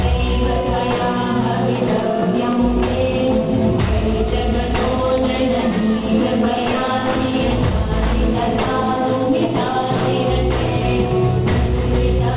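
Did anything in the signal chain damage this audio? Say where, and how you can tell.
Yes. The damage is aliasing at the sample-rate conversion stage, and it runs through the whole clip. The audio stops hard at 4 kHz, which fits a drop from 44.1 kHz to an 8 kHz rate. The high end carries gritty, metallic tones at unrelated pitches, roughly 15 dB below the wanted signal. The downsampler skipped its anti-alias filter, so content above 4 kHz folded back into the remaining band.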